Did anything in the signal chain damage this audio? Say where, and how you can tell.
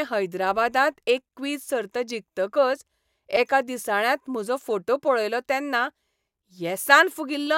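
Yes. At 3.36 s there is a block of digital silence at the driver or buffer stage: a hard cut to silence lasting about 5.3 ms, heard as a tick or dip, which fits a missed 256-sample buffer. Unlike network packet loss, nothing fills the hole.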